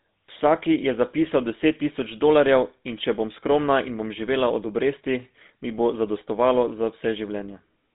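From start to finish the speech carries GSM full-rate codec damage: a buzzy, gritty texture from pulse-driven excitation, with band roughly 200 Hz to 3.7 kHz, fitting a 13 kbps stream.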